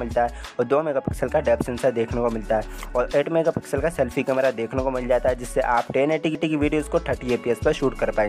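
At 6.35 s there's a CD skip: a knock or a disc flaw bumped the laser onto another turn of the spiral. The player drops out for only a couple of milliseconds, leaving a small tick, and the sound picks up from a different point with an abrupt jump.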